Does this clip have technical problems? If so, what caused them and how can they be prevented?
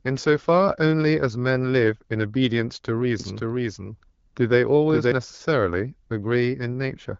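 Yes. A second, slower capture path or an out-of-step edit likely mixed the speech in twice from 3.20 to 5.12 s. This doubled audio track adds a full-band copy trailing about half a second behind at roughly equal level, starting and stopping abruptly with no room decay. Routing each source through a single capture path and checking edits for overlapping copies prevents it.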